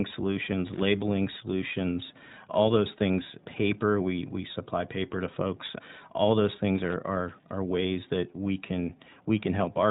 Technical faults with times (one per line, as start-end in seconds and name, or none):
0.00-9.91 iLBC codec
0.34 lost iLBC frames
0.74-0.86 loose connector crackle
6.75-6.94 loose connector crackle